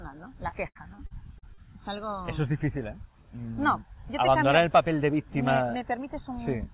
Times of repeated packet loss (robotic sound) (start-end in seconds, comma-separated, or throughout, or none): 0.48-1.60